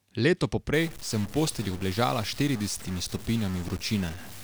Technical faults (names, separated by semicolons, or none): stuck bit